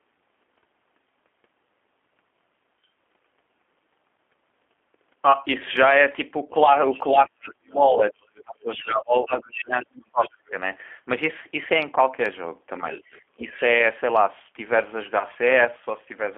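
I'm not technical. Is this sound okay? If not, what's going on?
No, there are several problems, one running through the whole recording and others at particular moments.

Throughout, this speech has passed through the G.729 codec, a heavily compressing phone-call format. It rebuilds the voice from a simplified model rather than storing the sound itself, and the line carries only roughly 250 Hz to 3.4 kHz. The result is thin, slightly rough and artificial-sounding, like an older internet phone call, and here that damage is plainly audible.

Between 6.89 and 7.53 s, 8.36 and 9.64 s, and 10.23 and 10.5 s, a second, fainter voice can be heard well below the main one. This is the other side's voice leaking through, likely because the talker's device played the other person on a loudspeaker and the echo canceller didn't fully remove it from the microphone.

From 7.11 to 10.53 s the main voice keeps sinking, at times almost disappearing, for about two seconds in total. 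Again at 13.37 to 13.55 s it dips, though only mildly. This is speech suppressed in double talk: likely, with both people speaking at once, the echo canceller couldn't tell the talker apart from the loudspeaker echo and turned everything down.

At 15.19 to 15.25 s there is a brief smeared moment. This is VoIP packet loss concealed by the speech codec: about 20 ms of audio went missing, which fits a single lost packet. The decoder filled the gap by stretching the last bit of sound, and the voice stays slightly off for a moment afterwards.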